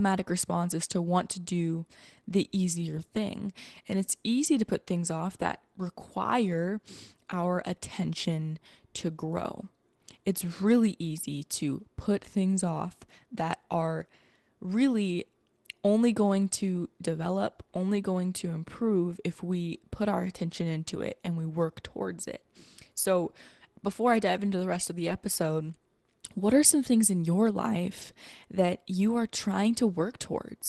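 Five brief rough patches come from lost packets rebuilt from error correction. They fall at 2.97 s, just after "to do the easier", at 4.43 s, just before "to put things off", at 17.95 s, from 25.09 to 25.15 s after "the rest of the", and at 28.01 s. Each time, a packet went missing, or two at 25.09 s. The next packet held a low-bitrate copy, which the decoder played instead. So nothing drops out. The speech just turns grainier and noisier for about 20 ms, or 40 ms at 25.09 s. The call codec's roughly 12 kHz cut-off can be heard throughout.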